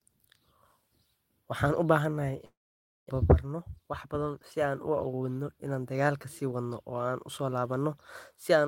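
Just after "u baahanahay", from 2.45 to 3.26 s, speech turns into a buzzy smear that fades into 0.56 s of silence, then resumes with 0.6 s missing, likely a long network dropout. A spectrogram shows a decaying smear, then a blank gap.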